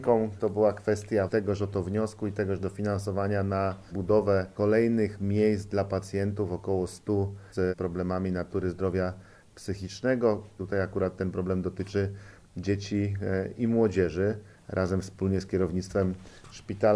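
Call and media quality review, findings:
No call or media quality findings to report.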